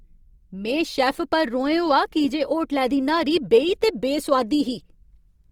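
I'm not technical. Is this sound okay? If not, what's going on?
No, the speech sounds grainy and rough all the way through, like a fine fizz riding on it, even though it stays bright and full-range. That's likely Opus compression: a streaming-style squeeze fills in detail with approximations, leaving that coarse, noisy texture.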